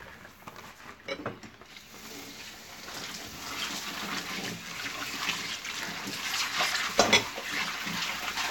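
Sounds with no technical fault to be heard anywhere in the recording. Nothing in it points to a problem in capture, processing or playback.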